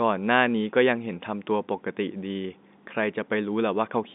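No technical faults can be heard anywhere in this speech.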